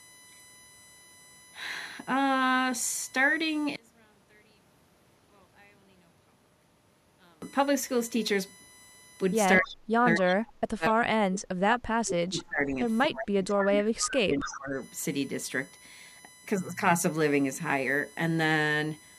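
A USB whine runs through the whole clip: a fixed tone built on 1 kHz, loudest in its harmonic at 18 kHz, sitting around 25 dB below the speech. It comes from the bus's 1 ms frame timing leaking into the audio through shared power or ground.

From 3.76 to 7.42 s the speech falls by about 36 dB to a thin residue. The likely cause is one channel inverted: the stereo pair is mixed to mono with one side's polarity reversed, so the centred voice cancels almost completely.

Between 9.58 and 12.78 s the speech dips and breaks up for roughly 3 s in total, at worst by around 40 dB, and again from 13.05 to 14.77 s for about 1.5 s, up to roughly 25 dB. This is likely speech suppressed in double talk: with both sides speaking at once, the echo canceller attenuates the talker along with the echo.

Short echo-leak fragments appear at 10.30–10.35, 12.38–12.43, 13.21–13.27 and 14.40–14.58 s. Each is a copy of the speech delayed by 242 ms, around 15 dB down, or about 10 dB at 13.21 s. 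These are likely residual loudspeaker pickup that the far end's canceller failed to remove.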